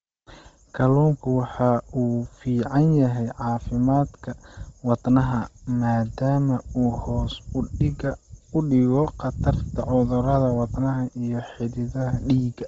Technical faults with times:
0.00-12.68 Bluetooth LC3 compression

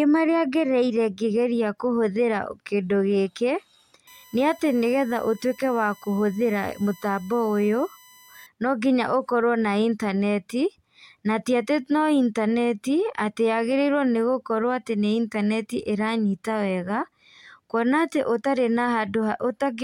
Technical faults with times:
4.07-8.46 USB whine

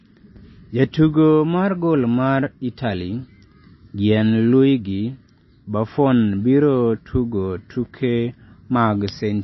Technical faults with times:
0.00-9.44 MP3 compression

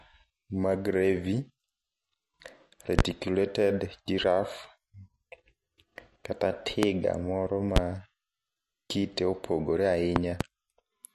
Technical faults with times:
0.00-11.14 MP3 compression
2.99-3.02 loud pop
6.83-6.86 loud pop
7.76-7.80 loud pop
10.16-10.44 loud pop

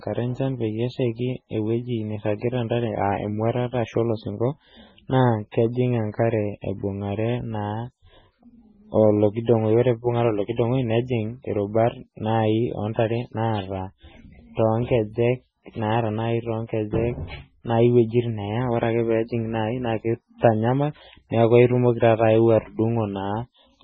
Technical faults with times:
0.00-23.83 MP3 compression
5.51-5.54 pre-echo

